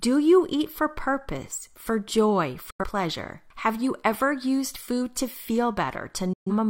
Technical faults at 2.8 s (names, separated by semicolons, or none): digital broadcast dropout